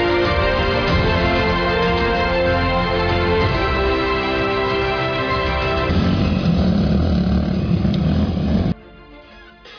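Nothing here trips me up: I can't pick out a single technical fault anywhere in the audio.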